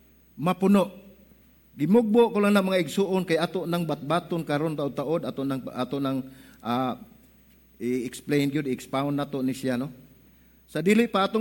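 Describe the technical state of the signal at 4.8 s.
At 4.8 s the signal is intact, with no audible dropout, distortion, noise burst or other technical fault at that point.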